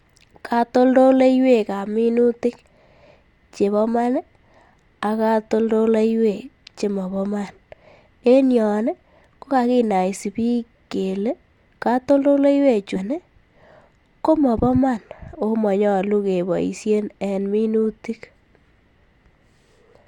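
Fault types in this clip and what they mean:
Stream segment skipped: at 12.95–12.99 s, after "kakinaisi biik kflee katoldoleiwechu", the speech jumps ahead with a small blip, likely from a segment that failed to load and was passed over.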